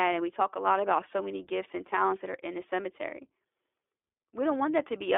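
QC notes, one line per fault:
Throughout, iLBC codec: the speech is confined to a narrow telephone band of roughly 300 Hz to 3.5 kHz, and each 20 ms frame is coded on its own, which fits a 15.2 kbps stream. That leaves a plainly rough, synthetic edge, unlike the smeared, watery artefacts of a transform codec.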